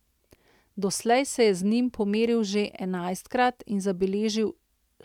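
No technical faults can be heard anywhere in the speech.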